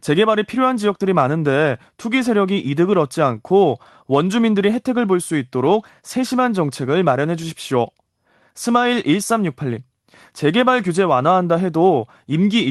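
No technical faults can be heard anywhere in the speech. It has clearly passed through a call link, with the high end rolling off at about 12 kHz and the coding texture typical of a codec such as Opus.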